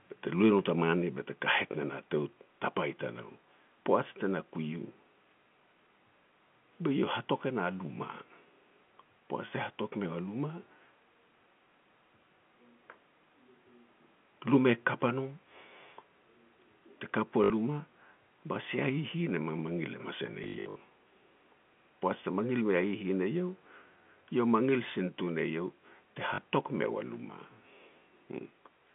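At 1.02 s the speech and its background drop suddenly by about 2 dB and stay there. This microphone volume stepped down was likely the call software cutting the input gain in a single step after judging the level too hot.

At 1.72 to 1.74 s, right after "bete kahet", a brief 20 ms blip is heard. This is packet loss with last packet repeated: one packet went missing and the receiver replayed the previous one.

From 4.08 to 4.11 s, just before "te na", the loudest syllable turns harsh and crackly. This is microphone overload, likely from input volume set too high. Peaks pushed about 4 dB past the converter's limit, flattening the tops of roughly one percent of samples.

The same repeated-packet fault returns three more times. At 17.44 to 17.50 s a 60 ms robotic buzz fits three lost 20 ms packets in a row, with the repeats droning at about 50 Hz. From 20.44 to 20.80 s the speech turns choppy and stuttering as 240 ms of loss scatters across 360 ms, with the longest unbroken run lasting 60 ms. 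At 26.34 to 26.38 s, between "eiau te" and "meu a", a 40 ms stutter points to two lost packets. All of this rides on narrow telephone-band G.711 audio, which stays within about 150 Hz to 3.4 kHz.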